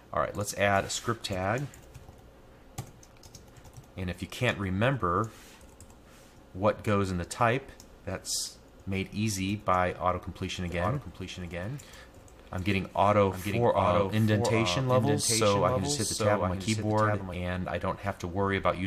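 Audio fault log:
10.70–17.34 s, doubled audio track: a second full-band copy trails about 0.7 s behind, a few dB quieter and dry, likely a second capture path or misaligned edit.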